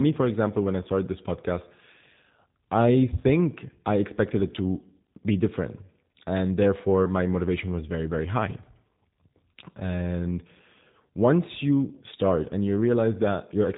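Speech passed through a G.729 codec runs the full clip, with plainly audible damage: a rough, slightly synthetic tone from filter-and-pulse resynthesis, consistent with 8 kbit/s G.729A. On a spectrogram, energy stops flat near 3.8 kHz, leaving empty space above.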